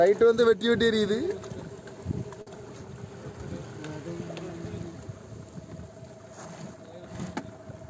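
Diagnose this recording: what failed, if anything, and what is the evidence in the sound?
A short stall from a late packet at the network and jitter buffer: at 2.42 to 2.49 s the sound is held for 47 ms, then resumes with nothing skipped, unlike packet loss.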